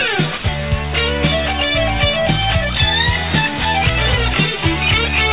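Audio carried over a narrowband call link with nothing above 4 kHz, consistent with G.711 A-law at 64 kbps. From 0.38 to 0.44 s, about 60 ms of sound gives way to steady, featureless noise: sound dropped by the voice detector, likely because the sender took that stretch for background and the receiver filled it with comfort noise. Unlike packet-loss concealment, nothing of the preceding sound is repeated or stretched.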